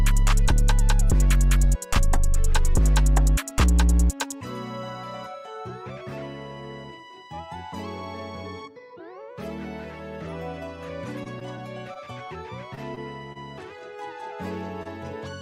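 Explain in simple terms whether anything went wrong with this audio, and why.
Between 11.23 and 13.37 seconds there are scattered short gaps. Around seven small pieces of the audio stream went missing or arrived too late, the longest roughly 30 milliseconds. The receiver patched each hole by stretching out the sound just before it, filling about 150 milliseconds in total. The audio stays clear through this stretch, but you hear a handful of brief ticks, smears and hiccups spread across those two seconds.

At 14.83 to 14.87 seconds there is one more short concealed packet loss. About 20 milliseconds of audio never reached the player in time, so it invented roughly 23 milliseconds to cover the hole by carrying the preceding sound forward, then blended back into the real signal. You hear this as a single quick smear or tick just before the end.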